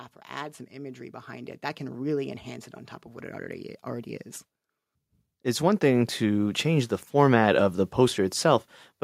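From 0.3 to 2.52 s, automatic gain rising: the gain control judged the input too quiet and raised it by about 8 dB, so speech and background swell together until "it on top of". On a waveform the envelope widens steadily, and a spectrogram brightens evenly across all bands.

At 3.61 s, between "top of what it" and "already is", an underrun with held sample occurs. The output buffer briefly ran dry and the converter held its last value for about 0.67 ms, which fits a gap of a few dozen samples. The waveform shows a short flat step, and a fraction of a millisecond of live audio was lost.

From 5.43 to 7.69 s the gain rises again, this time by about 9 dB, with the same slow, even swell across the whole spectrum and the same gradually widening envelope.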